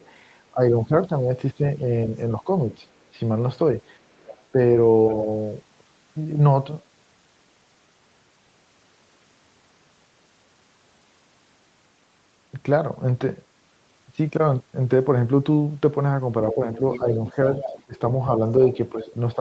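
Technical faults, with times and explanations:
0.00–2.76 s, speech suppressed in double talk: The speech dips in patches, falling by roughly 10 dB at worst and losing presence for well under a second in total. This is likely an echo canceller that heard both sides at once and turned everything down.
4.19–5.14 s, other side's voice leaking through: A faint second voice, roughly 20 dB below the main speech, sits underneath it for about a second. This is likely far-end audio from a loudspeaker that the echo canceller failed to fully remove from the microphone.
16.50–19.40 s, other side's voice leaking through: Through the last three seconds a second voice comes through, only about 10 dB under the speech. This is likely loudspeaker playback reaching the microphone, with the echo canceller leaving a strong residue during this overlap.
16.53–19.40 s, speech suppressed in double talk: Over the same stretch the main speech dips in pieces, sinking by roughly 15 dB at its deepest and adding up to well under a second. 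This is likely the canceller attenuating during simultaneous talk.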